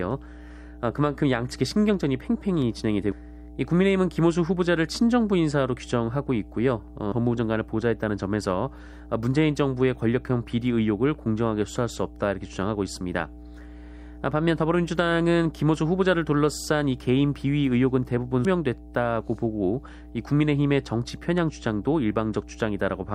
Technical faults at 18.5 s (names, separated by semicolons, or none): mains hum; damaged data in a compressed stream